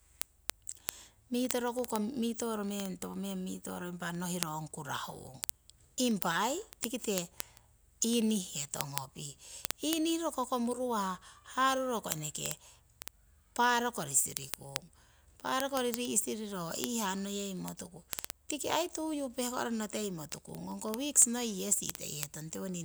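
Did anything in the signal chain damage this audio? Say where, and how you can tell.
Yes. At the digital interface, speech carries word clock ticks from 0.10 s to 22.79 s, sharp clicks about every 50 ms. The receiver runs unlocked, off by roughly 400 ppm, so each clock slip drops or repeats a single sample.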